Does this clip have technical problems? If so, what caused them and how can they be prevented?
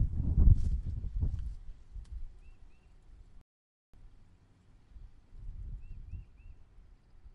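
Yes. A rebuffering stall runs from 3.41 s to 3.94 s: the audio drops to silence for about 0.52 s, then picks up at exactly the point where it stopped, so nothing is skipped but the playback runs half a second longer. The player had used up all the audio it had downloaded and had to wait for more data before continuing. A larger playback buffer, or a lower streaming bitrate on slow connections, would prevent it.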